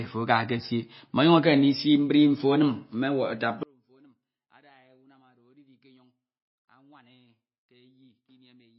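From the start the speech sounds dull and watery, with nothing above 5.6 kHz and a swirling, chirpy texture on the s sounds and consonant edges. This is likely MP3 compression at a very low bitrate, which fits something around 24 kbps. Starved of bits, the encoder chops off the treble at a fixed point and drops weaker frequency components, which then flicker on and off between frames and smear attacks.

At 3.63 s, right after "me wata", the speech collapses in mono, falling by about 37 dB and leaving only a faint residue through to the end. This points to one channel inverted. With one channel's polarity reversed, the centred voice present in both channels cancels when they are summed, and only the small difference between them survives.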